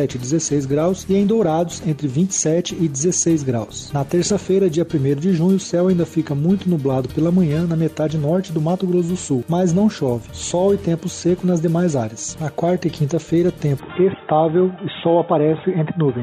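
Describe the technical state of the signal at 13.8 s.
At 13.80 s the sound abruptly narrows and turns dull and boxy, with no gap and no clear jump in level, and it stays that way until the clip ends at 16.22 s. This points to the input switched to a poorer device, likely a second microphone or a headset's call profile, which passes nothing above 3.8 kHz and adds its own faint noise floor far below the signal. On a spectrogram, energy above 3.8 kHz vanishes at a hard vertical edge. The waveform envelope continues without a break.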